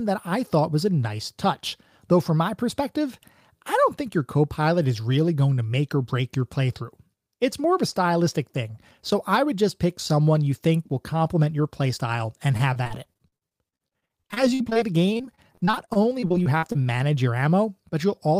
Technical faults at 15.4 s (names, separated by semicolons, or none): repeated packet loss (robotic sound)